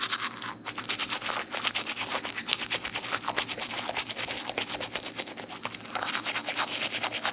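No technical faults can be heard in the audio, which has passed through a normal WebRTC call path whose narrowband coding leaves nothing above 4 kHz, consistent with a G.711 mu-law codec.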